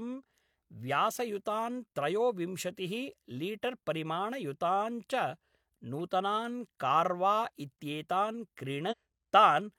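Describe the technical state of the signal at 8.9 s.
Damaged data in a compressed stream spans 8.87 to 8.94 s, right after "नूतनान् कार्वा इत्येतान्". Corrupted bytes there leave the decoder misreading frames and losing sync while it hunts for the next valid header, producing a brief chirp, squawk, click or short hole in the speech.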